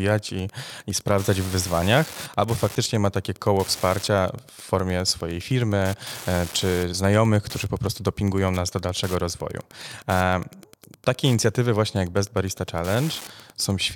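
A steady, faint ticking runs under the speech from start to finish, repeating about ten times a second and sitting roughly 20 dB below the voice. This is Wi-Fi interference: a nearby radio's beacon, sent every 102.4 ms, is being rectified by the audio circuit.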